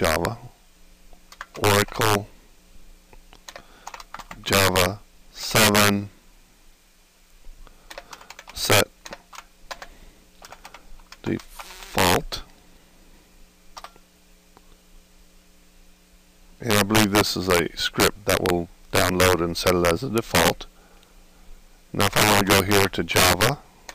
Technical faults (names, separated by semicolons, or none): integer overflow